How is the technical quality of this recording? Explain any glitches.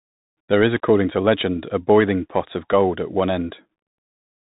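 The recording quality is poor: the speech has gone through a Bluetooth CVSD headset codec for its whole length. CVSD encodes one bit per sample, only whether the signal should step up or down, with an adapting step size, which fits a 64 kbps link. Nothing above about 3.8 kHz survives, so the speech sounds muffled and boxy. Loud high-frequency sounds outrun the step and distort, s sounds turn scratchy, and a granular hiss sits under the speech throughout.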